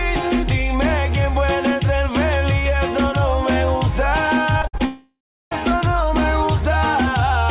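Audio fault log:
4.62 to 4.81 s, repeated packet loss (robotic sound): four gaps, the longest 57 ms, leave about 100 ms missing. Each hole is patched by repeating the last sound, so nearly half the span is concealment and sounds choppy. The spectrogram shows repeated, smeared blocks with hard edges.
4.85 to 5.61 s, long network dropout: nothing new plays for about 0.66 s. A buzzy continuation of the last sound fades into about 0.35 s of silence. The likely cause is a lengthy network interruption. The waveform shows a decaying tail, then a flat gap before the audio returns.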